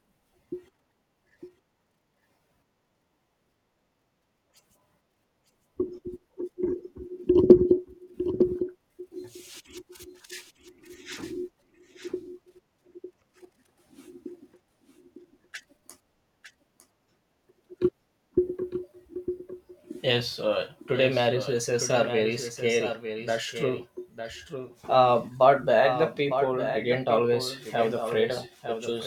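From start to finish the speech carries a doubled audio track: a second, full-band copy trails about a second behind, roughly 10 dB down, dry with no room tail. That's likely the same signal captured again through a slower path and mixed back in.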